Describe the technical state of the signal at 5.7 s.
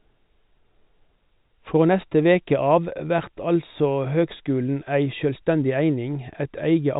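At 5.7 s the audio is intact, with the speech carried through G.711 telephone coding whose band stops at about 3.8 kHz.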